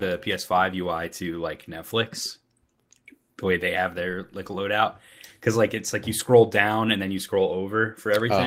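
At 1.31–1.33 s, 3.51–3.53 s (just before "they have their like") and 6.19 s (between "like it's like you" and "down and then you"), a lost packet was rebuilt from error correction. Each short stretch, consistent with a single 20 ms packet, was filled from a lower-quality backup copy, so there's no gap, just a brief rough, noisy blip.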